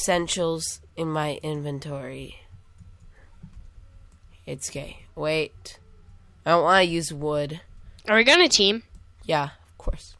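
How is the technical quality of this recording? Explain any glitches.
No glitches or technical faults can be heard anywhere in this recording.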